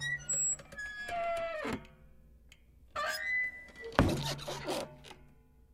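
No technical faults are audible anywhere in the recording.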